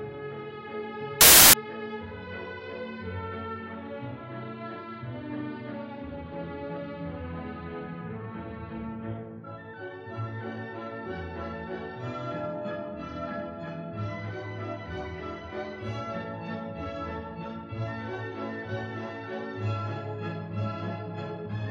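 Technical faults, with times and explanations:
1.21–1.53 s, samples built from the wrong bytes: for about a third of a second the audio turns into loud, harsh broadband noise, because each sample's bytes are combined wrongly and the rapidly changing low bits become the large part of each value. Unlike an added noise burst, this replaces the sound completely.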